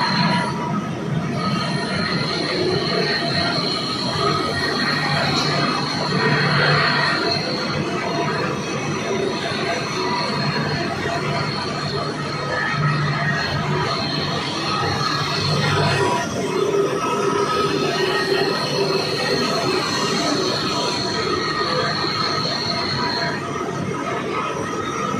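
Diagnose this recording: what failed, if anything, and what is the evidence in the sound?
Nothing in the signal chain shows a failure here, with no dropouts, clicks, distortion or level jumps audible at any point.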